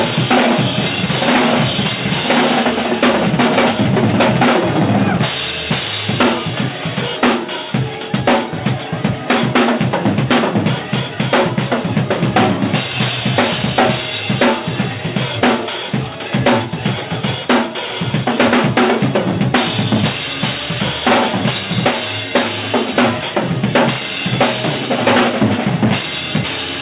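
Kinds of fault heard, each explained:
Nothing here counts as a fault; the sound simply carries the ordinary character of a call path using G.711 mu-law at 64 kbps, which is why there's nothing above 4 kHz.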